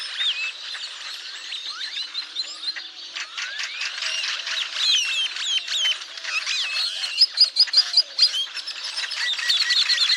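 At 7.06 s and again at 9.50 s there's a small jump in the sound, likely a dropped buffer (overrun), skipping roughly 10 ms and then a few milliseconds.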